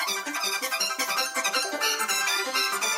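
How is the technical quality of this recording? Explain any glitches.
The technical quality is poor: the whole recording plays back far too fast and too high.

Throughout the clip there is a wrong sample rate fault. The samples are being played at a higher rate than they were captured at, with no conversion, so everything runs three times faster and sits about 19 semitones higher. That ratio fits material recorded at 16 kHz and played at 48 kHz. The sound is squeaky and frantic. On a waveform, events look squeezed to a third of their natural length. On a spectrogram, every component shifts up by a factor of three, and the upper limit of the content lands near 24 kHz instead of 8 kHz.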